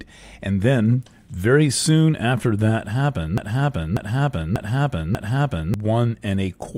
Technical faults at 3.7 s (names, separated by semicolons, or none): broken-record loop